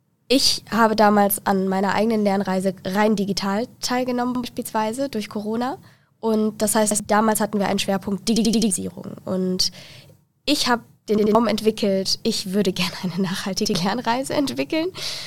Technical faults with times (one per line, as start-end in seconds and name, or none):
4.35-4.44 repeated buffer
6.91-7.00 repeated buffer
8.36-8.70 repeated buffer
11.18-11.35 repeated buffer
13.65-13.74 repeated buffer